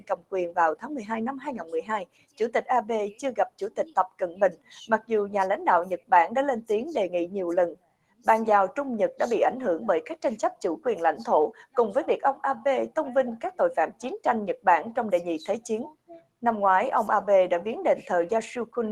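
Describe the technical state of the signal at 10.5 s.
At 10.5 s, as throughout, a noise suppressor applied to music or sounds treats sustained tones and tails as noise, ducking them by about 10 dB so the sound pumps and thins.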